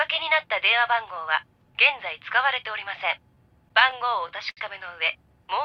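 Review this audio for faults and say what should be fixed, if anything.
Scattered short gaps between 3.35 and 4.13 s: about five lost or late packets, each under roughly 15 ms, patched by extending the preceding sound, visible as brief repeated-texture smudges or tiny waveform discontinuities.

Short stall from a late packet at 4.50–4.59 s: the jitter buffer emptied, so the last sound was held for 65 ms, showing as a flat, stretched spectrogram band before resuming.

A deeper, adaptive jitter buffer with better packet-loss resilience on the network path would prevent both.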